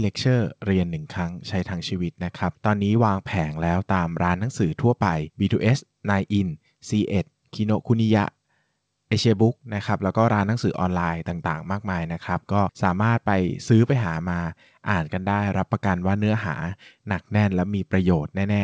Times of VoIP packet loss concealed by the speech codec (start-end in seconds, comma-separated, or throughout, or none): none